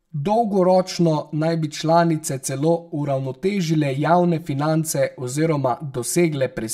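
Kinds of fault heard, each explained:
Channel delay (comb filtering): one channel lags about 5 ms before mono summing, carving evenly spaced notches from around 100 Hz, leaving the speech hollow and phasey.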